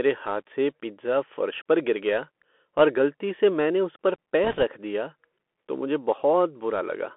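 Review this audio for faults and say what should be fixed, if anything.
The speech has been carried over a Bluetooth CVSD headset codec for its whole length. The headset link encodes each sample as a single up-or-down bit with an adapting step, which fits a 64 kbps CVSD stream, and the line passes only about 250 Hz to 3.4 kHz. The result is thin, band-limited speech with a granular hiss underneath. Loud, bright sounds overrun the step size and distort, and s sounds come out scratchy. To prevent it, record on the device itself or use a wideband headset profile instead of the narrowband CVSD link.

From 4.44 to 4.63 s, between "से मैंने उस पर" and "दिया तो मुझे", there are bit errors on the Bluetooth voice link. Radio trouble flipped bits in the CVSD stream, at a rate that sounds like around a couple of percent. Each bit carries only a small step and the errors fade out quickly, so there are no sharp clicks. 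Instead, that stretch picks up a rushing, crackly noise over the speech. To prevent it, keep the headset close to the receiver and away from 2.4 GHz interference.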